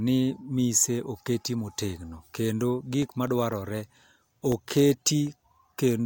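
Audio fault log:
3.02–5.77 s, periodic USB or driver dropouts: after "mise oket motegno kendo", about ten ticks every 0.25 s, each roughly a millisecond blanked to silence by a blocked driver.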